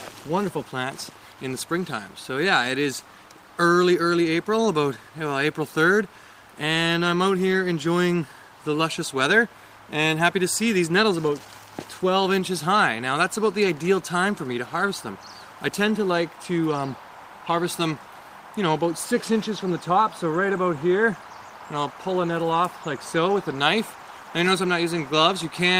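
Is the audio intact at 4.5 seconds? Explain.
Yes, the audio is intact at 4.5 seconds, with no dropout, glitch or other fault to be heard at that moment.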